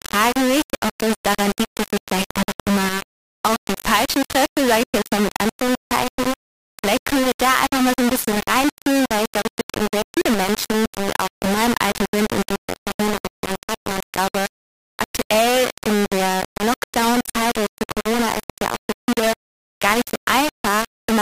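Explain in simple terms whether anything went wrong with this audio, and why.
Throughout the whole clip, the sound is coarse and grainy, with a rough distortion that shifts as the sound changes and quiet parts breaking up. This points to low bit depth without dither: the audio was likely stored with only about 3 bits, so every level gets rounded to a few steps.

At 4.83 to 4.94 s, and again at 12.73 to 12.77 s, the sound abruptly cuts to silence, then resumes as if it had kept playing. These are Bluetooth dropouts, likely from wireless packets arriving too late, roughly five in the first gap and one in the second.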